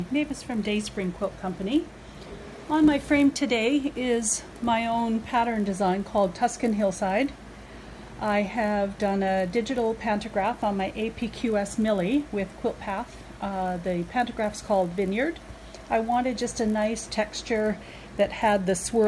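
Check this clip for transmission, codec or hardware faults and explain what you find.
One fault runs through the whole clip: the resampler restarted on every block. Each 20 ms block was converted from 48 kHz to 24 kHz in isolation, so its edges lacked true neighbouring samples. The resulting edge errors form a 50 Hz buzz that is present only while sound is playing.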